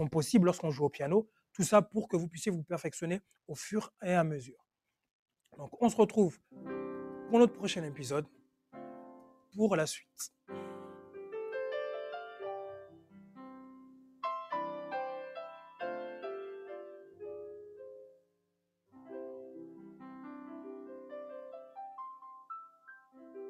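Throughout, a noise suppressor applied to music or sounds treats steady tones and tails as noise, so the level pumps and thins, with gain swinging by around 10 dB. At 1.27–1.58, 3.21–4.02, 8.29–11.15, 12.85–14.23, 16.95–17.21, 18.03–18.96, 19.84–20.01 and 22.73–23.22 s, sound cut by the noise suppressor sinks by about 6 to 20 dB as held parts and decays are clamped.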